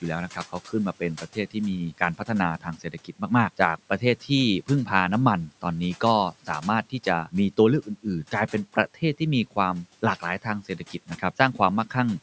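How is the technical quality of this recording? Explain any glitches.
The recording shows speech cut by the noise suppressor at 1.17–1.56 s, 1.92–2.29 s, 2.6–3.3 s and 10.69–11.21 s. The suppressor mistook quiet speech for noise and dipped it by about 11–12 dB, so brief bits sound swallowed. The audio comes through call microphone processing that tops out around 8 kHz, with room noise sitting about 25 dB under the speech.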